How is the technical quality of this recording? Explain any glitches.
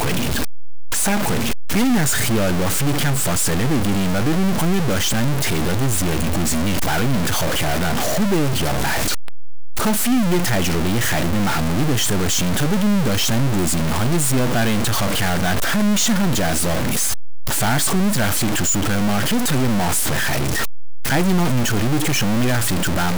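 The quality is poor: a harsh, buzzy distortion runs through the whole recording, riding on the speech wherever it is present, and the pauses between phrases are not quiet but filled with a gritty noise. The likely cause is a stuck bit, one bit of each sample held at a fixed value. The stuck bit sits fairly high, with a step of roughly -15 dBFS, so the error is large. About half the samples land off by that step, buzzing along with the speech, and small values crossing zero trip it constantly, which is why the gaps hiss so loudly.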